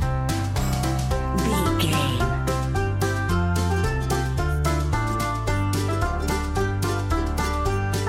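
No technical faults can be heard anywhere in the recording.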